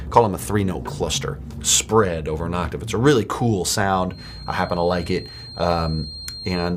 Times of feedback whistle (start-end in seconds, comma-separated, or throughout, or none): 4.07-6.76